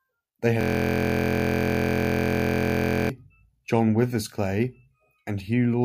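From 0.61 to 3.1 s, a system hang loop: the system froze and the hardware kept replaying one 23 ms buffer, which fits 1024 samples, producing a steady 43 Hz buzz.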